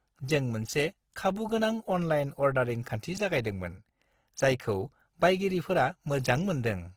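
Throughout the speech, Opus compression damage is plainly audible. The sound is grainy, rough and noisy rather than swirly, likely from Opus's music mode starved near 16 kbps. A spectrogram shows full bandwidth, but the harmonics are smeared into noise-filled bands.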